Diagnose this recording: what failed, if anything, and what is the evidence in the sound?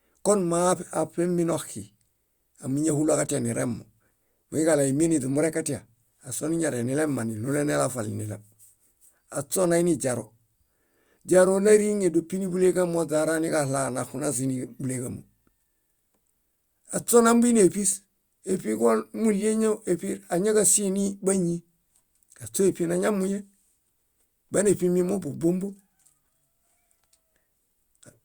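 Nothing stood out on listening to this speech recording.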